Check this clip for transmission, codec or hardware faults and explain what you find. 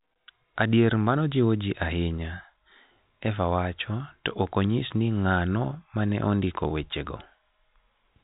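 One transmission fault stands out. From 6.68 to 6.70 s, right after "ng'ano ma ne ondiko", there is packet loss with pitch repetition. About 20 ms of audio went missing, which fits a single lost packet, and the receiver bridged the gap by repeating the last pitch period. It comes across as a brief, slightly buzzy hold on the sound. A plain dropout would leave a hard gap or click instead. The G.711 telephone coding is heard as the usual cut-off above 4 kHz.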